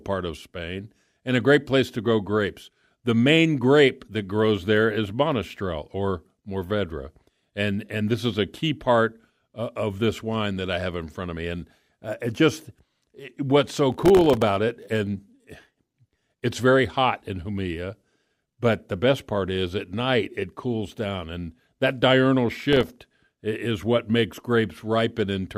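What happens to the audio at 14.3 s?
Processor overload crackle runs from 13.92 to 14.42 s, so 14.3 s falls inside it, starting just after "just it what's so" and clearing before "it and". Under heavy load, the audio buffers, each around a millisecond and a half long, kept missing their deadlines, some thirty times over that half second. Each miss dropped in a brief hard-edged silence, and together those gaps form a gritty, tearing crackle over the speech until the load eases.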